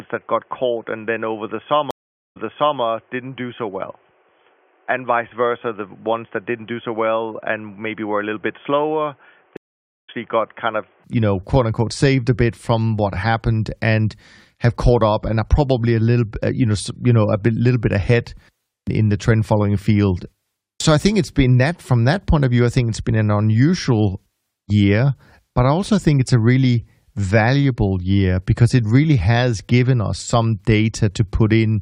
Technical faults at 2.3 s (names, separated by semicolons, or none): input switched to a poorer device; stream reconnect